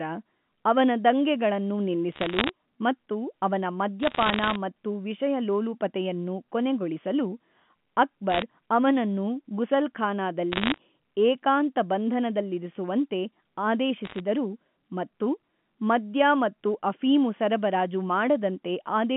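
Bursts of bit errors on a digital phone line crackle through the speech at 2.12–2.49 s, 4.00–4.56 s, 8.30–8.42 s, 10.52–10.78 s and 14.05–14.20 s, at roughly half a percent to one percent of bits flipped. Each flipped bit corrupts one sample, and hits on the sign or upper bits give sharp ticks. Unlike packet loss, nothing drops out; the band-limited G.711 speech carries on unchanged beneath the crackle.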